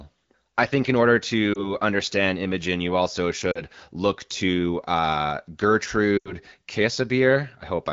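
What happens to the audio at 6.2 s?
The speech briefly smears and fades from about 6.17 to 6.33 s, with the sound sinking quickly toward near silence before the voice returns thin and rough. These are lost AMR speech frames, a gap consistent with about four 20 ms frames. With no valid data, the AMR-WB decoder repeated the last good pitch and vocal tract settings at falling gain, and in wideband that fade-out happens quickly.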